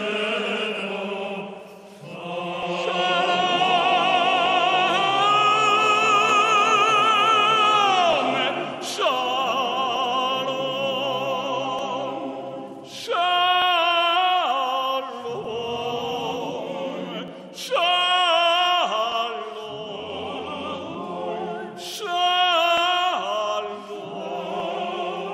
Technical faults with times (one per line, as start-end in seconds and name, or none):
0.79-24.60 clock drift buffer slips